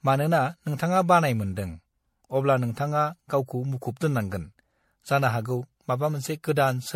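From start to finish, the speech has a swirly, watery texture and a hollow tone. Consonant attacks are smeared rather than crisp. Nothing is heard above 16.5 kHz. This is generation loss. The audio was likely decoded and re-encoded with MP3 about five times, each pass quantising on a shifted frame grid. The damage piles up, and the result sounds worse than a single encode at what seems to be around 64 kbit/s.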